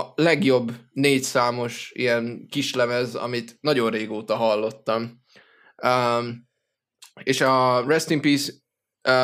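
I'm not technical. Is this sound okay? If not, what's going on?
Yes, this recording sounds fine, with no technical problems to point to. Nothing in it is going wrong, so there is nothing to explain.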